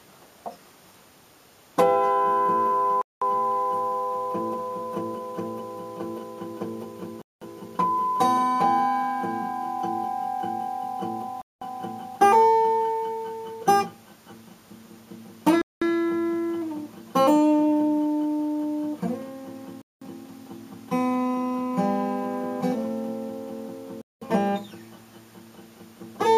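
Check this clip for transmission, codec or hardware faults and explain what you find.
One fault is present: gap between chunks. Silent holes of 200 ms start at 3.02, 7.22, 11.42, 15.62, 19.82 and 24.02 s, with 4-second blocks of audio between them. Silence is inserted at every chunk join rather than audio being dropped, so the sound stops and resumes at a steady 4.2-second rhythm.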